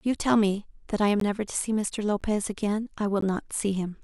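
Gaps between stream segments occur at 1.2 s, 2.21 s and 3.21 s in this speech clip, each a hard-edged hole of silence lasting roughly 12 to 14 ms. The spacing of about one second matches 1 s segment boundaries: at each join the timestamps leave a small shortfall, and the player fills it with silence. The speech on either side is intact, so nothing is lost, but the inserted silences break its continuity.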